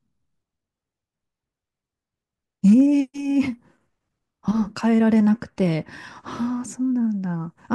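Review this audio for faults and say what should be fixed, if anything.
Hard clipping occurs from 2.67 to 2.81 s. The speech peaks there exceed what the signal path can pass by about 1 dB. They are cut flat, adding high harmonics heard as brief crackle. Leaving more headroom before conversion would prevent it.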